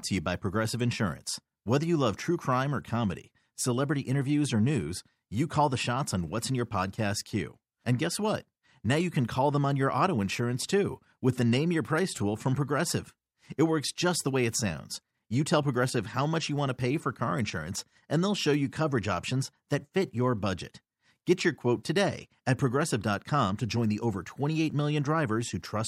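Pre-echo at 21.84 s: a transform codec spread its quantisation noise across a block of about 26 ms. The sound suggests it never switched to short blocks, so noise about 14 dB louder leaks roughly 12 ms ahead of a sharp attack, heard as a brief hiss that blurs its onset.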